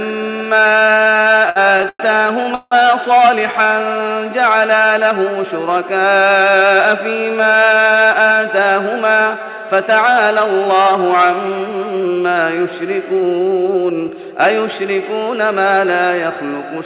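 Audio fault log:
0.98–2.01 s, repeated stalls (stutter): the sound catches and restarts twelve times in about one second. Packets were arriving late or more slowly than playback consumed them, so the jitter buffer kept emptying. Each time, the receiver stretched the last sound forward until fresh audio came in. That filler adds up to about 253 ms, roughly a quarter of this stretch, and the longest hold is about 101 ms. Nothing is lost, but the flow drags and judders.
2.55–2.73 s, call audio freeze: the sound stops moving and the last moment is held and fades for about 168 ms, ending in about 30 ms of silence before the audio picks up again exactly where it paused. This is likely a brief hold-up of packets in transit that drained the jitter buffer and left the receiver bridging the wait. The gap is added rather than cut out, so everything after it runs about 168 ms later.
3.48–3.75 s, jitter buffer slow-down: the sound slows to about 86% of normal speed while keeping its pitch, with parts drawn out. 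The jitter buffer was short of reserve, so the receiver repeated single pitch cycles and slivers of pause again and again. This adds about 46 ms and lets the buffer build up a reserve. Because only these narrow strands within the sound are repeated, the pitch stays put.
5.81–6.61 s and 13.74–14.17 s, jitter buffer speed-up: the sound briefly hurries, at about 107% and then about 108% of normal speed, with the pitch unchanged. The jitter buffer had built up more audio than it wants, so the receiver trimmed out short pieces of one or a few pitch cycles in a row. This removes roughly 70 ms in the first stretch and roughly 40 ms in the second, through a telephone-band path with nothing above 4 kHz.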